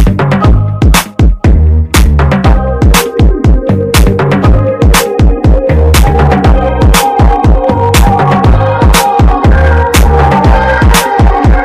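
Throughout the clip, the signal arrives about 12 dB hotter than a stage can pass, so hard clipping cuts its peaks flat, with nearly a third of the waveform pinned at the limit. Those squared-off tops throw harmonics high up the spectrum, laying a harsh fuzz over every loud moment.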